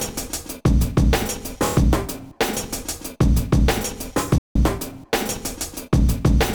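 At 4.38 s the sound cuts out abruptly in mid-flow and the output stays completely silent for about 170 ms, until 4.56 s, when it resumes. This is a playback stall: the gap has no fade or ramp, just a hard drop to nothing and a hard restart. The likely cause is the player running short of buffered data, or its playback thread being briefly blocked, so nothing reached the output until it recovered.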